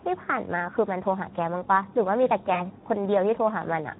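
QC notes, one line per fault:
Throughout: Speex codec damage, plainly audible. The speech sounds hoarse and grainy because the excitation gets too few bits at this setting, which fits roughly 11 kbps. Any content above 8 kHz is a shaped noise fill. It is constant, unlike a brief dropout.
2.53 to 2.61 s: VoIP packet loss concealed by the speech codec. About 20 ms of audio is missing, which fits one lost frame. The decoder fills the gap by extending its last pitch and filter, so the sound is briefly stretched and fades. The voice stays weak for tens of milliseconds after packets return, so it is not a clean click or gap.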